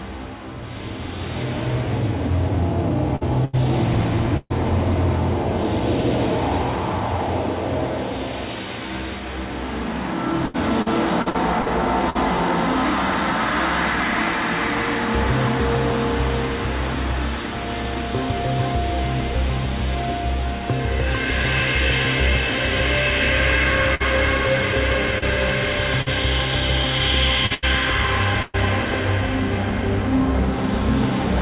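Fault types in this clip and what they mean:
Repeated packet loss (robotic sound): Packets dropped again and again, each hole patched by extending the previous sound, giving a choppy, robotic texture. Three stretches, 3.16–4.53 s, 10.46–12.18 s and 27.46–28.57 s, with 3, 6 and 3 gaps; the longest is 129 ms, and 17–21% of each stretch is filled in.
Burst of packet loss: A run of late or lost packets left a gap the receiver bridged by continuing and fading the last sound, then resuming further on. At 23.95 s about 53 ms is filled, and at 26.02 s about 45 ms; each skips 40 ms of audio.
Short concealed packet loss: At 25.18 s, 34 ms of audio that never arrived in time is synthesised from the preceding sound and blended back in. The result is a brief smear with 40 ms of the original missing, heard through narrowband call audio with nothing above 4 kHz.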